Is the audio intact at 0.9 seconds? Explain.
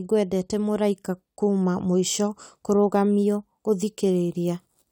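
Yes, the speech at 0.9 s plays through intact, with no audible fault at that moment.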